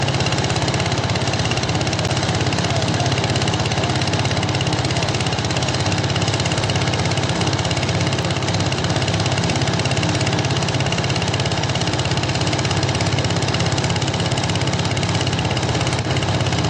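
At 2.08 s and again at 8.22 s the audio drops to a block of digital silence, about 10 ms and 1.3 ms long. Samples were zeroed with no fade, so each is heard as a short tick.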